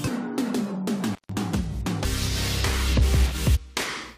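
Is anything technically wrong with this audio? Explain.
Yes, there are two kinds of fault.

From 1.13 to 1.32 s the sound drops out for about 145 ms, with crackle at both edges and only faint hiss in the gap. This is an intermittent contact: a loose plug or cable briefly loses its connection, so the signal path opens and nothing reaches the input but background noise. The scratchy bursts on either side come from the contact making and breaking as it settles.

At 2.04 s and again from 3.55 to 3.57 s there is a short glitch, heard as a chirp, squawk, click or brief hole lasting a few tens of milliseconds at most. This is damaged data in a compressed stream. Corrupted bytes make the decoder misread the affected frames and lose sync. It outputs a garbled fragment while it searches for the next valid frame header, then resumes.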